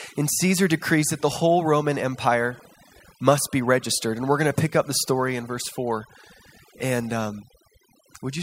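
Overdone noise removal affects the speech from start to finish. A noise reduction stage was pushed too hard. It pulls individual frequency bands far down, or mutes them, whenever they sit close to its idea of the noise. Quieter parts of the voice fall below that line and vanish with the noise. The gaps between phrases drop to near silence, dotted with twinkling specks.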